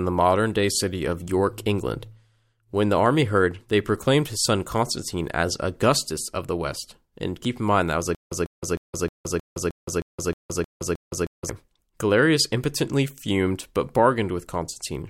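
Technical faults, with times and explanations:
8.15 to 11.49 s, stutter with silent gaps: right after "in mind that was", the same short burst of speech, about 146 ms long, comes back 10 times at a steady pace of roughly one every 312 ms, with about 166 ms of silence between each. It's likely a stalled player or stream replaying its last fragment on each retry, then running dry. Whatever should have played during those seconds is simply gone.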